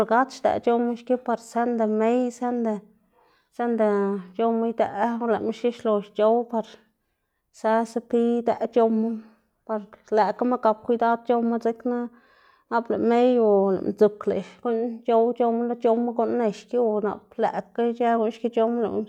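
No technical faults can be heard anywhere in the recording, and the signal holds steady throughout.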